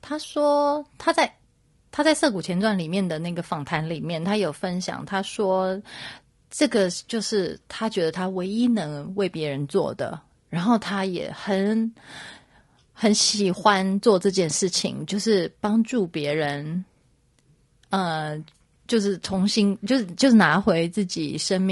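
Throughout the speech the voice sounds rough and grainy, with noise filling the gaps between harmonics and a thin, synthetic top band. This is likely low-delay AAC compression, AAC-ELD, whose short frames blur pitch detail at a rate that fits roughly 32 kbps.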